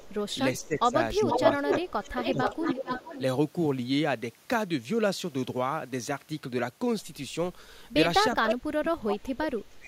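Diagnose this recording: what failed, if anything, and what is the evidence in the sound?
Echo leak in call processing, likely an incomplete echo canceller: copies delayed 367 and 461 ms at 0.0, 0.58, 1.28–3.22 and 8.34 s, from faint to speech-level, showing as time-shifted duplicate harmonics.

Speech suppressed in double talk at 0.61–0.95, 1.19–2.9 and 8.35 s to the end: gain dips of about 15 dB, then about 30 dB, cut notches into the waveform, likely from the same canceller's suppressor.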